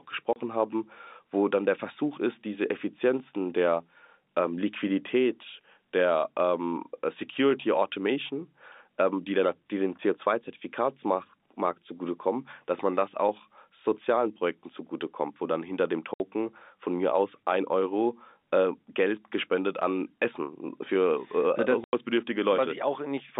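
Packet loss filled with silence cuts the speech three times. At 0.33 s a 30 ms gap falls just before "haben wo dann der". At 16.14 to 16.20 s a 60 ms gap sits between "wo dann hinter dem" and "von mir aus ein". At 21.84 to 21.93 s a 90 ms gap follows "äh das". The steps in gap length suggest 30 ms packets. The receiver inserted digital silence rather than concealment, so each hole has hard edges against the band-limited telephone audio.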